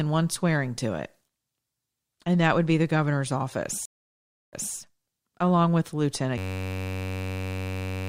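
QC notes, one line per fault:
3.85–4.75 s, stream reconnect: Right after "would be the governor's", the speech drops out for about 0.67 s. The connection broke and the player restarted its decoder mid-stream. The speech returns 0.22 s earlier than where it stopped, so a fragment repeats.
6.38–8.09 s, system hang loop: After "along with", one 10.67 ms slice of audio repeats exactly until the clip ends. This produces a steady 93.8 Hz buzz. The system froze while the hardware kept replaying its ring buffer, which fits a 512-sample buffer. About 1.5 s of speech is lost.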